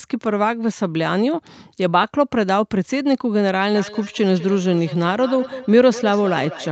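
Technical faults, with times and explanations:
3.75 to 6.71 s, feedback echo between two devices: From 3.75 s to the end of the speech, each word returns about every fifth of a second. The repeats peak at about 13 dB below the speech. A second device in the room plays the call aloud, and this microphone picks it up again. The local echo canceller only removes its own device's playback, so the stray copy goes back into the call. Each pass sounds thinner and more ringing, within the call's 8 kHz ceiling.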